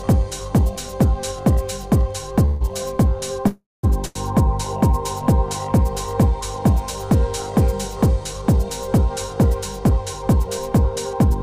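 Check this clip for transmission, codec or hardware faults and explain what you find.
Three transmission faults are audible, all in the first half of the clip, and all from packets reaching the receiver late rather than being lost.

Call audio freeze, 2.45 to 2.63 s and 3.47 to 3.85 s. Delayed packets likely drained the jitter buffer, so the receiver extended the last sound as a fading buzz or hiss, about 150 ms the first time. The second lasts 360 ms and falls to silence for 190 ms. The audio then resumes where it stopped, nothing missing.

Short stall from a late packet, 4.05 to 4.17 s. A packet arrived after its playout time, emptying the jitter buffer, so the receiver held the preceding sound for 100 ms with a faint buzz or dip before continuing from the same point, losing nothing.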